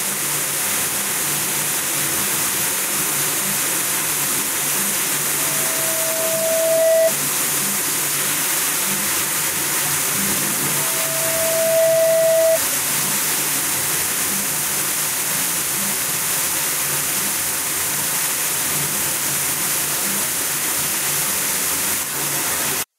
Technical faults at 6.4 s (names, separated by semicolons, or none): loudspeaker feedback squeal